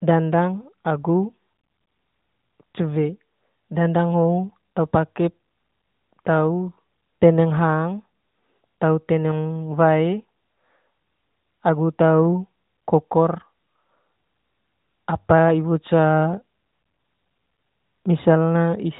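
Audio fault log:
No fault turns up anywhere in the speech. The AMR narrowband mobile codec path is working, audible as a phone-like band with nothing above 4 kHz and only light coding texture, which fits AMR-NB's top 12.2 kbps mode.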